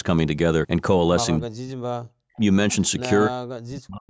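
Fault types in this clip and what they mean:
Speech suppressed in double talk: The speech dips sharply from 1.38 to 2.13 s, and again from 3.27 s to the end. In both stretches it falls very deep, close to silence. A brief, shallower dip of about 40 ms comes at 2.36 s. The likely cause is an echo canceller that heard both sides talking at once. It could not tell this talker from the loudspeaker echo, so it turned both down.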